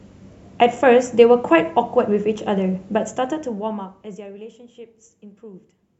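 A speech clip, and nothing is technically wrong with it.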